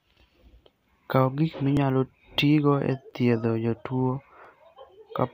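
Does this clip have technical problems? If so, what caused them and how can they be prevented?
Yes, there are regular clicks every 1.33 s from 0.44 to 4.45 s, about four of them. These are clock drift buffer slips, likely from two unsynced devices drifting apart by roughly a tenth of a percent. Lock both devices to one shared word clock to prevent it.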